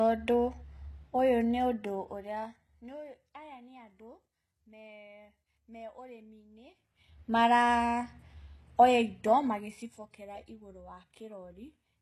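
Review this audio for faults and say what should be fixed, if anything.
Throughout the speech, the treble sounds synthetic and plainly damaged by the codec, and nothing is present above 12.3 kHz. This is likely HE-AAC compression at a low bitrate, which fits about 16 kbps. The codec keeps only the lower spectrum and regenerates the treble by copying lower bands upward and shaping them with a coarse envelope, so the upper harmonics no longer match the originals. To prevent it, encode at a higher bitrate, or use plain AAC or a lossless format.

From 9.36 to 10.08 s, a rapid ticking, zipper noise, rides on the speech while the level falls by roughly 15 dB. The gain moves in 1 dB steps, around 30 per second, and each step is applied instantly with no smoothing, so every jump leaves a small click. To prevent it, ramp gain changes smoothly from sample to sample instead of updating them in coarse increments.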